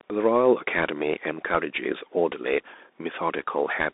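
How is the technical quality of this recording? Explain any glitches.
The recording is heavily narrowband, with plainly audible codec damage from start to finish.

Bluetooth CVSD headset codec, throughout the clip: the speech passes through a narrowband Bluetooth headset link that encodes each sample as a single up-or-down bit with an adaptive step, which fits a 64 kbps CVSD stream. The band runs only from 250 Hz to 3.7 kHz, with nothing above 3.8 kHz, so the speech sounds thin and boxy. Loud, bright sounds outrun the step size and distort, s sounds turn scratchy, and a granular hiss sits beneath the speech.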